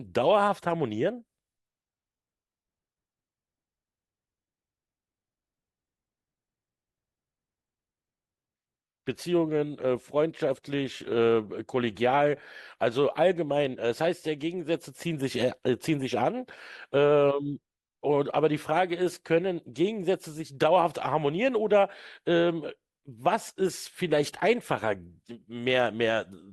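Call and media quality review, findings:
Nothing to flag on this speech recording, as no problems turned up anywhere in it.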